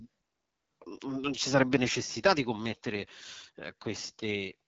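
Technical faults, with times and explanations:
Throughout, AMR wideband (HD Voice) codec: rough, raspy speech with content stopping near 7.5 kHz rather than narrowband's 3.4 kHz; the plain coarseness fits a low rate like 8.85 kbit/s.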